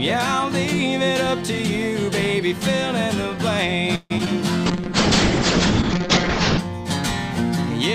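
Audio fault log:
3.95–4.12 s call audio freeze: the last sound stretches into a fading buzz with a short silence, then resumes where it left off. Nothing is lost, unlike concealed loss. This is likely a jitter buffer running dry.
4.18–4.21 s and 4.25–4.28 s short concealed packet loss: about 40 ms is missing each time, bridged by a brief smear, then the audio skips forward rather than resuming in place.
4.66–6.65 s call bitrate drop: coding falls from 128 to 6 kbps and bandwidth narrows from 20 to 8 kHz, giving a rough, muffled sound for nearly two seconds, not a momentary glitch.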